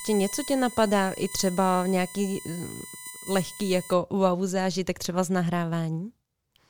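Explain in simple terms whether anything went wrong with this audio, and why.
A thin, steady, high-pitched whine sits under the speech from the very start until about 3.93 s, stopping just before "wow zážitek třeba z". It is quieter than the speech and sharpest near 9 kHz. This is USB whine: a USB connection draws power in bursts a thousand times a second, and that rhythm leaks into the audio through the power or ground wiring. It produces a 1 kHz tone plus higher multiples of it.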